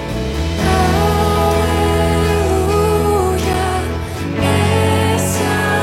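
The audio has a single gap between stream segments at 3.53 s, where a hard-edged hole of about 8 ms of silence cuts in. Two segments' time stamps don't meet, and the player pads the space with silence, so nothing is lost but the sound briefly stops.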